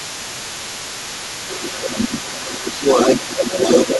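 From the start to the end of the clip, a second voice runs underneath the speech at about 10 dB below it. This is the other side's voice leaking through, likely residual loudspeaker echo the canceller left in the microphone. Unlike crosstalk, it comes from the loudspeaker playing the other side back into the microphone rather than bleeding in from a separate channel. Against that leak, the speech sinks by roughly 10 dB from 0.11 to 0.88 s, 1.76 to 2.44 s, 3.16 to 3.6 s and from 3.86 s to the end, and more gently at 2.77 to 2.97 s. This is speech suppressed in double talk, likely the canceller ducking everything while both sides spoke. It differs from ordinary fading because the dips track the overlapping voice.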